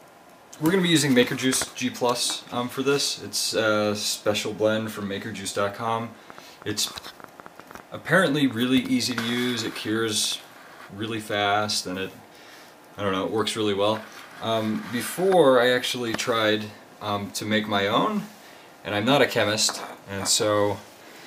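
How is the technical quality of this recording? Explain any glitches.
The recording has one clear glitch. From 5.88 to 10.33 s, a train of clicks, about thirty at roughly 6 per second with uneven spacing, ticks over the sound, peaking about 5 dB above it. It is likely interference or a faulty connection or power supply. Its repeated, same-shaped pulses distinguish it from random crackle.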